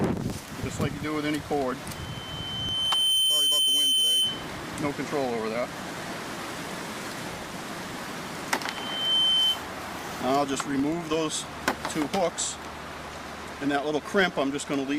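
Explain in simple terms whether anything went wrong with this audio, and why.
Yes, something went wrong: there's loudspeaker feedback squeal in two places. From 1.95 to 4.51 s a high, steady whistle around 3.1 kHz swells up over about a second and sits above the rest of the sound, then it comes back from 8.65 to 9.62 s at the same pitch, building faster this time. The mic was picking up its own loudspeaker, and at that one pitch the loop kept amplifying itself.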